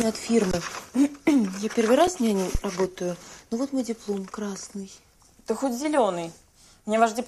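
An underrun with held sample occurs at 0.51 to 0.53 s and again at 2.07 s, where the output buffer ran dry and the converter simply froze on its last value until data arrived. The waveform flattens at whatever level it had reached, so the audio stops abruptly without a pop, for about 20 ms the first time and about 5 ms the second. Because the live audio kept moving while playback stalled, roughly that much sound is missing each time, and playback picks up later in the material. A phantom power thump follows at 2.55 to 2.60 s: a supply being switched on a live input sent a voltage step through the coupling capacitors, which comes out as a low, dull thud. Here it dies away quickly, with a decay of about 13 ms, so it reads as a short, deep knock rather than a long boom.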